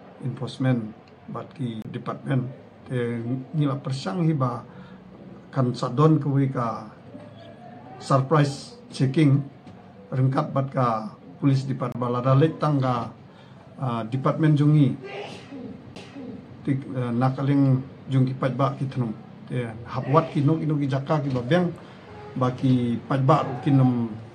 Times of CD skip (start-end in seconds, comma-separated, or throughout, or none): 1.82-1.85, 11.92-11.95, 15.95